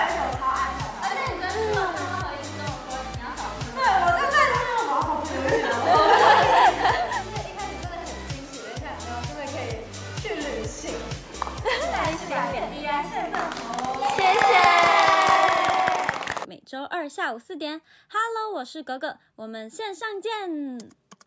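No technical faults can be heard; the only trace of the call microphone processing is the missing lowest bass and nothing above 8 kHz, which is normal for that path.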